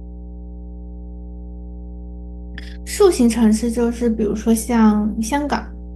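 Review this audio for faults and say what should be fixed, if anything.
Mains hum at 60 Hz runs through the whole speech clip, fairly strong at roughly 15 dB below the voice. A ground loop or nearby transformer is leaking the power line into the signal, which shows as steady horizontal lines at 60 Hz and low multiples on a spectrogram. To prevent it, break the ground loop with balanced cabling or an isolator and keep recording gear away from transformers.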